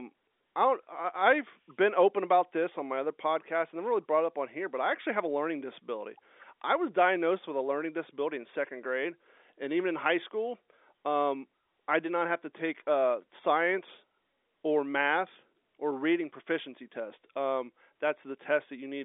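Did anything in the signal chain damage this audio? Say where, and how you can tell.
No, no damage found.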